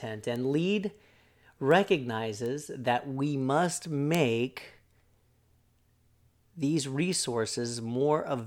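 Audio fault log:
0.36, 1.71, 2.46, 4.15 and 7.13 s: bit error spike. A flipped bit throws a single sample, two at 4.15 s, out by a power of two and straight back, so you get a bright broadband tick unrelated to the speech. It peaks around -21 dBFS, and the one at 4.15 s is louder at about -9 dBFS.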